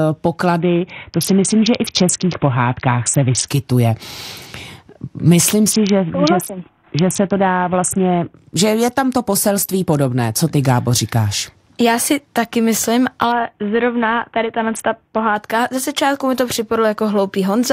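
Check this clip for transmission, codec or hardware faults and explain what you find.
Three Bluetooth SBC bit pool drops, at 0.6 to 3.48 s, 5.72 to 8.36 s (ending just before "že je tam to") and 13.32 to 15.36 s (between "si taky myslím" and "ze začátku mi to"). The link starves the encoder, which fits a bit pool falling from 28 to 5, near 54 kbps. The upper sub-bands lose their bits, so the speech turns dull and gritty until the rate recovers.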